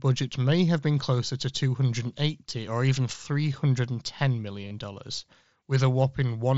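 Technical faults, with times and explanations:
4.62–4.71 s, concealed Bluetooth headset packet loss: about 60 ms of audio went missing over a 90 ms span on the wideband mSBC headset link. The gaps were filled by repeating the closest-matching piece of the preceding waveform. Because the longest unbroken gap is only about 22.5 ms, the patches come out as brief, buzzy repeats with small warbles where the real signal resumes, not as one sustained tone.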